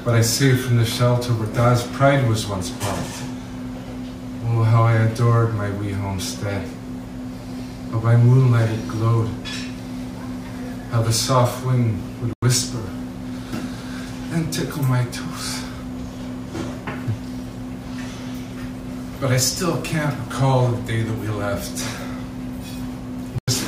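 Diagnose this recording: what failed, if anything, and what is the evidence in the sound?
Codec decoding failed. Corrupt frame muted: abrupt silent holes at 12.28 to 12.42 s and 23.38 to 23.48 s, each fitting about two rejected frames. Timing holds.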